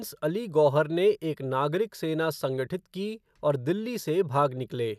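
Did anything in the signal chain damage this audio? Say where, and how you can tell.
No, nothing in the signal chain audibly damaged this speech recording, and its level, continuity and timing stay steady throughout.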